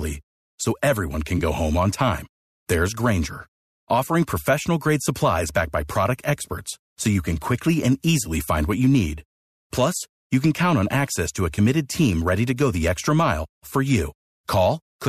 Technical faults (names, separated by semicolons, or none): AAC frame loss with concealment